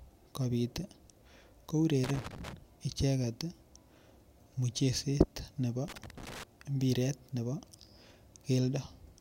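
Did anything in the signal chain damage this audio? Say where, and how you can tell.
Yes, there's loose connector crackle in the analogue wiring: irregular scratchy bursts from 2.04 to 2.53 s and again from 5.88 to 6.43 s, right after "mucheset nebo". A worn or dirty contact is making and breaking, chopping the speech and popping on any DC.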